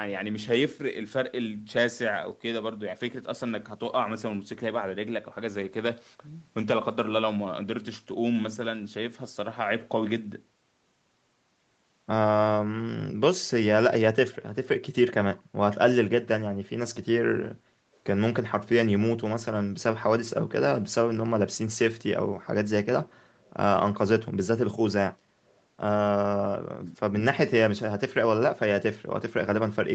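At 17.65 to 17.85 s the echo canceller clamped down on the microphone while the loudspeaker was active, so the background was gated. The room tone beneath the speech sinks by about 6 dB for around 150 ms and then comes back once the canceller releases. It is heard as a brief dip in the ambience rather than a cut in the speech itself.

Two short echo leaks follow, at 23.43 to 23.5 s and again at 25.48 to 25.59 s. The likely cause is that the far end's echo canceller let part of its loudspeaker pickup through and sent it back down the line. Each is a very faint trailing copy of the speech, lagging by 312 ms and sitting around 40 dB beneath it. Its matching delay marks both as the same return path.

From 26.45 to 26.96 s, speech is suppressed in double talk. Both ends were talking at once, and the echo canceller, probably unable to tell its own talker from the loudspeaker echo, pulled everything down together. 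The talker's speech falls by roughly 20 dB across about 0.4 s of that span. It sounds as though the speech is ducked and partly swallowed, dropping back to full level once the overlap ends. All of it sits inside the 8 kHz bandwidth of the Opus call path.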